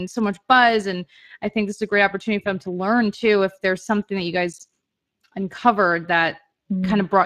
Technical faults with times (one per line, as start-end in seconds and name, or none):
0.00-7.26 Speex codec